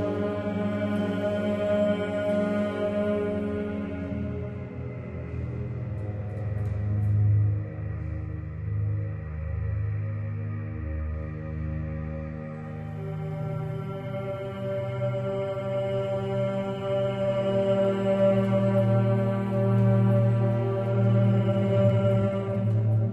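Everyday sounds make up the recording, and from 20.89 s to the end at 23.13 s there is a time-stretched section. The pace jumps to about 1.64 times normal speed and turns rushed, yet the pitch does not rise. That steady pitch separates it from a plain speed-up or sample-rate error, which would shift pitch upward. The likely cause is software squeezing that stretch to fit a length by dropping short pieces.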